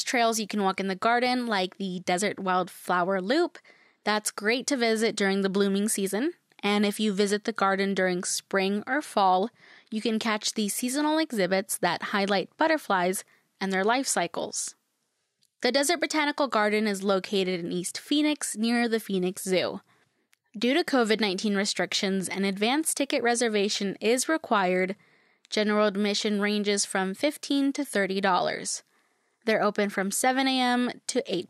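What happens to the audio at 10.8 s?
Nothing goes wrong at 10.8 s: the speech continues through that moment intact, with no dropout, click, glitch or other fault.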